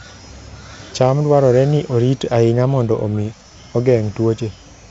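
No faults are audible; the speech has gone through G.722 wideband telephone coding at 56 kbit/s, so the band stops near 7.8 kHz and the coding leaves a light hiss above 4 kHz.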